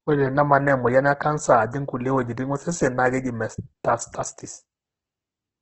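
Throughout, heavy Opus compression, likely from a low bitrate near 12 kbps, leaves the speech grainy and rough, with nothing above 8.2 kHz and a noise-filled spectrogram.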